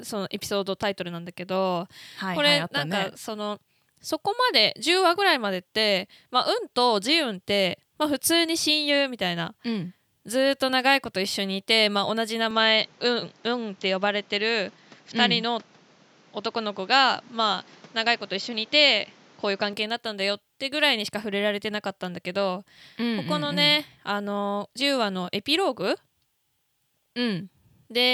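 In this speech recording, from 12.51 s to 19.73 s the sound turns duller and boxier, with nothing above 7.6 kHz and a new background noise far below the speech, though the level holds steady and there's no gap. The likely cause is the input switched to a poorer device partway through.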